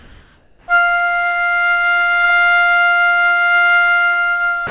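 From 0 to 0.68 s, the background is a steady, even hiss with no texture or movement, sitting about 34 dB below the loudest sound and at the same level as the real background that follows. This is likely comfort noise in place of the background: the sender's voice detector judged the opening to hold no sound worth sending, and the receiver generated shaped synthetic noise for those 680 ms instead of passing the actual ambience.

At 4.67 s, the final 40 ms of sound is cut off and replaced by the same featureless noise until the clip ends. The likely cause is sound dropped by the voice detector: the tail of the sound fell below its threshold, transmission stopped, and comfort noise filled the gap. Throughout, nothing reaches above 4 kHz, consistent with a narrowband call codec on the path.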